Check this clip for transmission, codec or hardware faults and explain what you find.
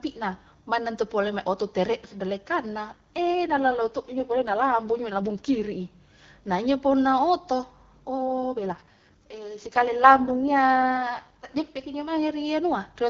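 The clip has one fault type, an AMR rate drop, heard twice in this AMR wideband (HD Voice) speech call. It runs from 2.91 to 5.72 s and again from 8.22 to 11.84 s. A weak radio link makes the network lower the codec rate and spend the freed bits on error protection. The band stays wide and there is no gap. The speech turns rough, raspy and synthetic, which fits a drop from 12.65 to 6.6 kbit/s. Clarity returns when the rate recovers.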